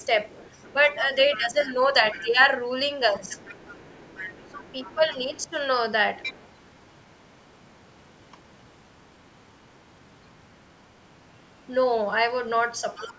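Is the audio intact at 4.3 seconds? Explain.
No, 4.3 s falls inside a stretch of the other side's voice leaking through, running from about 3.27 to 5.48 s. A second, fainter voice sits underneath the main talker, roughly 20 dB down, so it's quiet. The likely cause is the far end playing out of the talker's loudspeaker and getting picked up by the mic, with the echo canceller failing to strip all of it out before the signal went back down the line.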